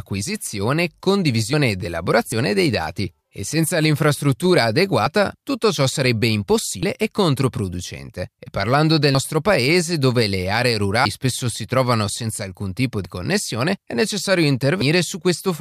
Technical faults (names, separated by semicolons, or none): dropped buffer (overrun)